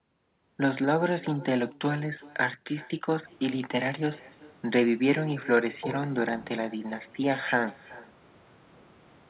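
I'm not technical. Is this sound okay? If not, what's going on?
No. All the way through, every bit of speech is followed a little under half a second later by a faint, thin repeat of itself. This is echo with no canceller: the person at the other end has the call playing through a loudspeaker, their microphone picks it back up, and nothing strips it out, so the speech returns after travelling there and back. The muffled, phone-like tone comes from the call connection itself.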